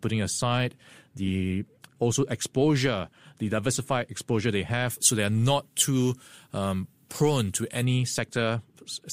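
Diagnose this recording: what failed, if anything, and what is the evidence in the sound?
Pre-emphasis left on from 4.90 to 7.85 s, just after "the diversified exposure they". The treble rises by about 13 dB at 10 kHz relative to 1 kHz, in a smooth curve that fits FM's 75 µs pre-emphasis. This points to a de-emphasis stage that was skipped. Sibilance turns harsh and the sound thin, but without the crackle of clipping.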